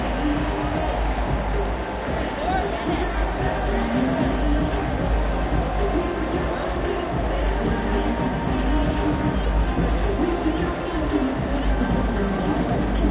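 Nothing in the audio stood out as a technical fault on listening.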